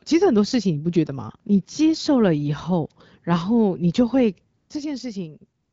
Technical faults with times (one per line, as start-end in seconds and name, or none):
4.57-4.69 AMR comfort noise
5.61-5.72 AMR comfort noise